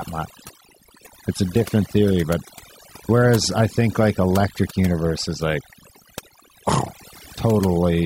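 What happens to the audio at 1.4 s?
At 1.4 s the speech is affected by overdone noise removal, which runs through the whole clip. An overly aggressive noise reducer drops individual frequency bands that sit near its noise estimate, so the background drops and breaks up into twinkling specks. A noise gate would mute everything at once; here single bands vanish independently.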